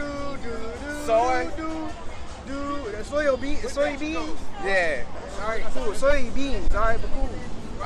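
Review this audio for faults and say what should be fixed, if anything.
A Bluetooth SBC bit pool drop runs from 1.92 to 3.25 s. Treble dulls and gritty noise rises, which fits the bit pool falling from 28 to 13, about 102 kbps. Reducing radio congestion or fixing a higher minimum bit pool would prevent it.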